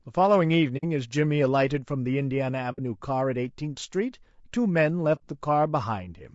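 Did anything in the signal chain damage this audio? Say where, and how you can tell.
Yes. At the codec stage, the speech is rough and grainy throughout, with noise between harmonics. That points to low-delay AAC compression, likely AAC-ELD near 32 kbps.

On the network or transport side, there is AAC frame loss with muting at 0.77, 2.72 and 5.15 s. Each is a soft-edged silent hole of about 60 ms, which fits two lost frames zeroed by the decoder.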